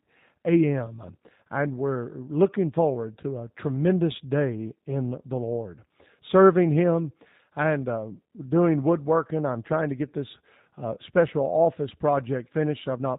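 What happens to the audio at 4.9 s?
At 4.9 s the speech carries G.729 codec damage, present throughout the clip. It sounds rebuilt from a filter, pitch predictor and sparse pulses, consistent with 8 kbit/s G.729A: rough, slightly synthetic, and plainly audible. A spectrogram shows nothing above 4 kHz.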